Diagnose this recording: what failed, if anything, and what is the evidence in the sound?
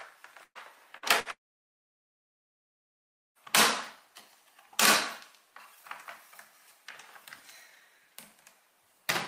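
Network stage: bursts of packet loss at 0.43–0.58 s, 0.97–1.05 s and 1.20–1.28 s, each a short fading fill over roughly 60 to 120 ms of missing audio.

Then a long network dropout, likely, from 1.31 to 3.38 s: a brief fading fill, then about two seconds of silence before audio resumes further on.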